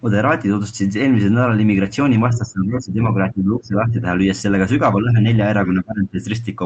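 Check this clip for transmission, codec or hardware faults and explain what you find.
There is one fault: speech suppressed in double talk, in four stretches: 2.30–3.01 s, 3.17–3.97 s, 5.02–5.18 s and 5.60–6.22 s. The speech drops by around 20 dB in three of them and only slightly at 5.02 s. The likely cause is an echo canceller failing to separate near-end talk from simultaneous far-end echo and attenuating both. Audio comes through a call codec band-limited near 8 kHz, consistent with Opus at a low bitrate.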